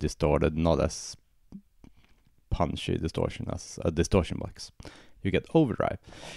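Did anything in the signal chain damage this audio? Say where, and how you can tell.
No, none of the stages from capture to playback leave any audible damage on this audio.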